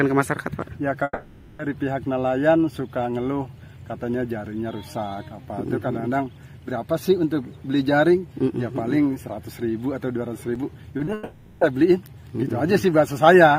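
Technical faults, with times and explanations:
1.03 to 1.61 s, long network dropout: About 0.56 s of audio is missing. The last sound carries on as a fading buzz, then about 20 ms of silence, likely from a network outage.
10.55 s, block of digital silence: A 2.7 ms hole cuts abruptly to silence and back, which fits a 128-sample buffer left unfilled. A gap this short is heard as a tick or dip.
10.97 to 11.01 s and 11.05 to 11.09 s, short concealed packet loss: Two 20 ms gaps are filled by extending the preceding sound. Each blends back, heard as a brief smear.
11.13 to 11.63 s, long network dropout: About 0.48 s never arrives. The receiver stretches the last sound across the whole gap, so it smears and fades without falling silent, likely from a network outage.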